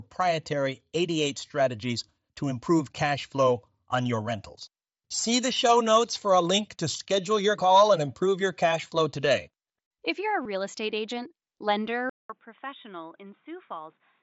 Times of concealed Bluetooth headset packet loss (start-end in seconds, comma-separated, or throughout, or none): 10.43-10.45